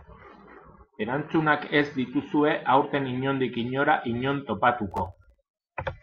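From 4.91 to 5.44 s the speech breaks into processor overload crackle. The processor falls behind and misses many buffer deadlines in quick succession. Each missed buffer leaves a short hole of silence with hard edges. The holes are tiny, which points to buffers of only a millisecond or two. Around twenty of them cluster in that half second. Together they sound like a gritty, tearing crackle over the speech. It stops once the load passes.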